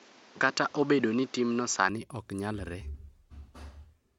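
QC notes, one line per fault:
0.00–1.89 s, input switched to a poorer device: the opening's dull and boxy, nothing above 7.6 kHz, with faint extra hiss well under the speech and a level a few dB off. It then opens up cleanly with no gap, likely a switch to a narrower-band mic.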